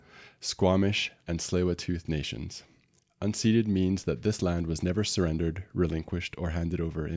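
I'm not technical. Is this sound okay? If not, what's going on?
Yes, this sound is okay; nothing is going wrong with it.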